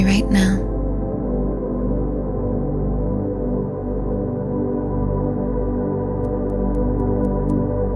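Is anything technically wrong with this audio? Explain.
Yes. From 6.25 s to the end at 7.95 s, the resampler restarted on every block. The audio was converted from 48 kHz to 24 kHz in separate 250 ms chunks, and each conversion began without the samples on either side, so every chunk boundary carries a small error. The result is a regular tick at 4 Hz, heard only while sound is present. On a waveform, small discontinuities recur every 250 ms. A spectrogram shows thin vertical broadband lines at the same spacing.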